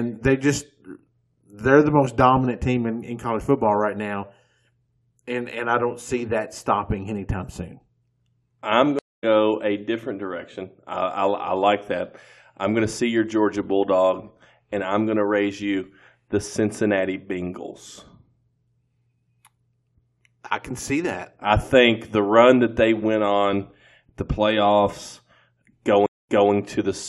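A stream reconnect breaks the connection twice. At 8.99 s, 0.24 s of silence; playback resumes about 0.2 s further on, at "a different direction I". At 26.06 s, 0.22 s of silence; 232 ms repeats.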